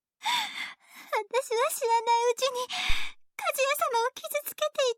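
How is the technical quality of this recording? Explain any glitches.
One glitch mars the recording: a phantom power thump from 2.90 to 3.16 s. Phantom power, or a similar supply, was switched on or off on a live input, and that sudden voltage step travelled through the coupling capacitors into the signal path. The result is a deep, low thump peaking at about -14 dBFS, whose energy falls away over roughly 60 ms before the tail settles by 3.16 s.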